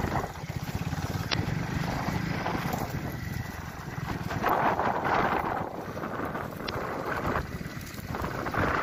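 Damaged data in a compressed stream causes three short glitches at 1.30–1.34, 4.46–4.50 and 6.65–6.70 s. They show as broadband vertical smears on a spectrogram and abrupt waveform breaks where the decoder lost frame sync.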